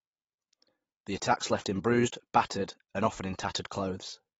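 AAC compression throughout: the coder discards everything above 7.6 kHz, leaving the speech dull and smeared, likely AAC-LC at a low bitrate near 24 kbps.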